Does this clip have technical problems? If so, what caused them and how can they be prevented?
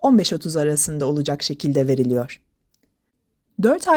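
No, the speech comes through as a continuous, intact signal, carried by Opus voice compression at 20 kbps in its hybrid fullband mode, which keeps the full audio band rather than narrowing it.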